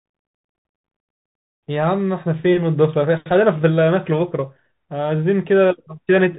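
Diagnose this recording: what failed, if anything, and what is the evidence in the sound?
The failure is at the codec stage: a Bluetooth CVSD headset codec across the whole speech clip. Nothing passes above about 3.8 kHz, so the sound is narrowband and dull. The coding damage is plainly audible. CVSD sends one bit per sample, only up or down, with an adaptive step size. Fast, loud high content outruns that step and distorts. S sounds turn scratchy, and a granular hiss sits under the speech. The character fits a 64 kbps CVSD link.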